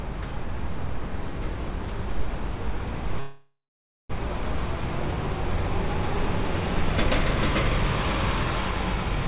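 At 3.2 to 4.12 s a call audio freeze stalls the sound: a fading buzz or hiss, then about 0.48 s of silence, likely from a starved jitter buffer, before playback resumes without loss.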